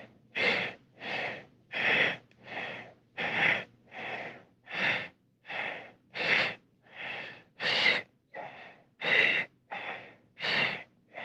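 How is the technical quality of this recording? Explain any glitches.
Nothing glitchy turns up here; the audio runs steady the whole way with no dropouts, clicks or other technical hiccups to explain.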